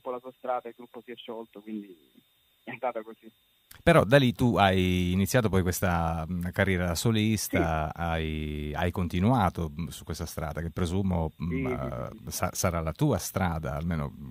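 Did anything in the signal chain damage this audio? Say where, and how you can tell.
No, nothing along the chain has left an audible mark on this audio. Every stage from capture to playback appears to have passed the sound along intact.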